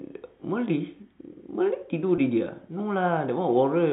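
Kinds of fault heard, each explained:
Packet loss with pitch repetition: A short stretch of the speech was lost in transit, from 2.16 to 2.18 s. The receiver covered the gap by repeating the last pitch period. The gap is 20 ms long, which fits a single lost packet. It is too short for the repeat to fade to silence. Instead it sounds like a brief held, slightly buzzy tone. The speech then picks up again. The narrow telephone band stays the same across the gap.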